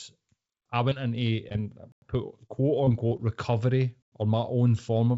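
Speech over a call link, with audio topping out at 8 kHz as you'd expect from a G.722 path, and it has three kinds of trouble. First, short concealed packet loss at about 0.90–0.93 s and again at 1.49–1.57 s, where two losses sit back to back. Each time about 20 ms of audio never arrived, and the decoder papered over it by extending the last sound, so you get a quick smear or wobble rather than a clean hole. Then there's a gap between chunks at 1.92–2.02 s and again at 4.02–4.12 s: 100 ms silences landing every 2 s. That spacing points to the audio being handled in 2-second chunks with dead air inserted at each join. Nothing is lost there, but the flow gets chopped. Finally, 2.47–3.20 s has repeated packet loss (robotic sound). Four separate losses, the longest about 22 ms and around 80 ms in total, each patched by the same continue-the-last-sound trick. Packed that closely, the patches give the stretch a choppy edge, with roughly a tenth of it filled in rather than real.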